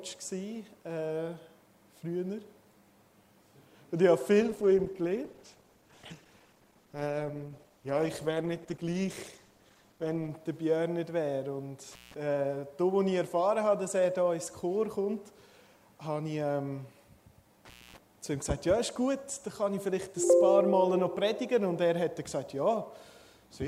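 From 4.42 to 10.37 s there is a call bitrate drop. The bandwidth estimate fell and the encoder starved. The sound turns rough and muffled, with high frequencies gone. It stays at its worst for about 5.9 s. This fits a fall from around 128 kbps to 15 kbps.

An intermittent contact follows at 11.92 s, running to 12.14 s. A loose connection opens briefly. The sound drops out for about 160 ms, with crackle at both edges. A second break hits at 17.65 to 17.98 s, open for about 240 ms.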